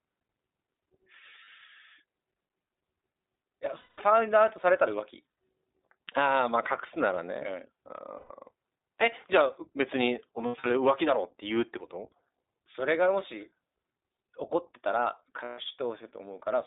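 From the start, the speech passes through the iLBC codec. The band runs only from about 250 Hz to 3.7 kHz, so the sound is thin and narrowband. Codec damage is plainly audible: a rough, slightly synthetic grain. The coding suggests the 15.2 kbps mode with 20 ms frames, each frame's excitation coded on its own.

Lost iLBC frames break in six times. At 1.44 s about 60 ms goes missing. At 3.78 s a 200 ms gap follows. At 5.32 s about 80 ms is lost. At 8.18 s about 120 ms is lost. From 10.46 s, losses total about 160 ms, scattered over 240 ms, with the longest run near 70 ms. At 15.44 s about 140 ms goes. In each gap the decoder repeats the last pitch cycle mixed with noise. It sounds like a held, buzzy vowel that fades over the longer losses. The speech recovers almost at once afterwards.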